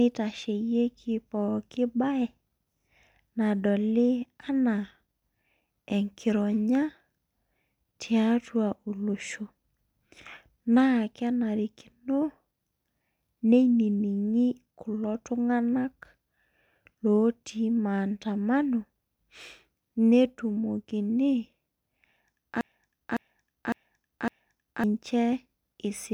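A broken-record loop runs from 22.61 to 24.84 s in the speech: a 0.56 s fragment repeats exactly four times back to back. The player or stream likely stalled and kept resending its last buffered piece, so the speech due in that span is lost.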